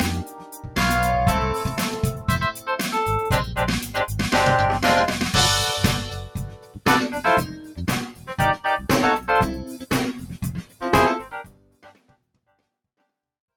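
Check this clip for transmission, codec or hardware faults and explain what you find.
A speech-tuned noise suppressor is processing this audio, and in places it pulls the sound down hard.

Noise suppressor applied to music or sounds, throughout. The processor treats sustained tones, ambience and decays as noise. Onsets pass, but held parts sink. The level swings by roughly 15 dB, so the sound pumps and thins.

Sound cut by the noise suppressor, at eight points: 0.23–0.77 s, 2.52–2.68 s, 6.15–6.86 s, 7.48–7.79 s, 8.08–8.32 s, 10.16–10.43 s, 10.59–10.82 s and 11.23–12.37 s. Here the suppressor mistakes steady material for noise. Drops reach about 11 to 14 dB, deepest at 6.15 s and 11.23 s. Tails shorten and dip. The last, longest cut overlaps a smooth fade-out that starts near 11 s.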